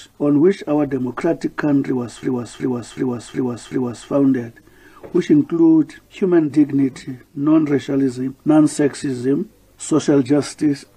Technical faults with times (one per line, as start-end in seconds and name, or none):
2.23-4.09 system hang loop